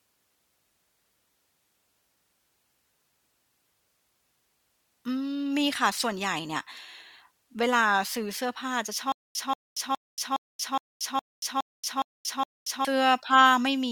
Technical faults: stutter with silent gaps

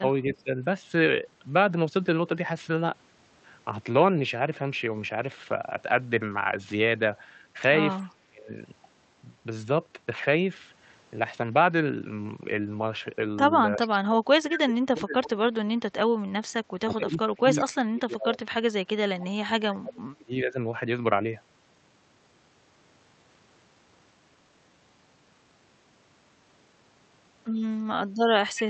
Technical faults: speech suppressed in double talk; echo leak

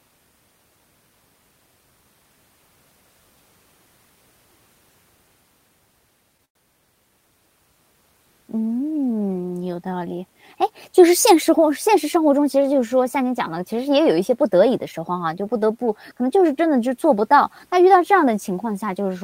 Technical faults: call audio freeze; jitter buffer speed-up

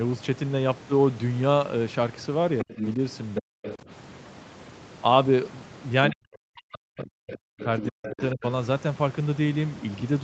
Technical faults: other side's voice leaking through; speech suppressed in double talk; chunks out of order

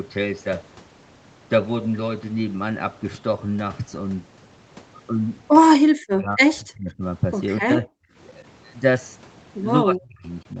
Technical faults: speech suppressed in double talk

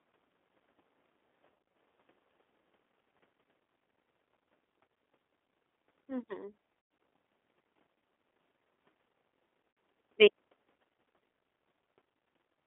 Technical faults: G.729 codec; VoIP packet loss concealed by the speech codec

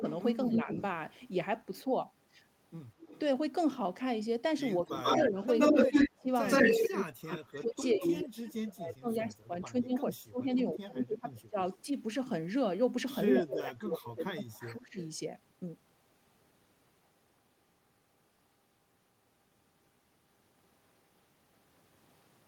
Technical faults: speech suppressed in double talk; echo leak

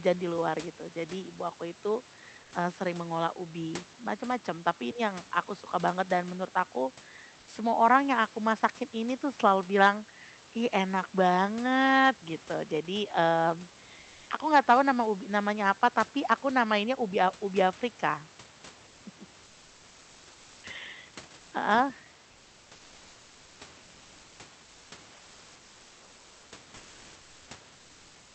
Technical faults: comfort noise in place of the background

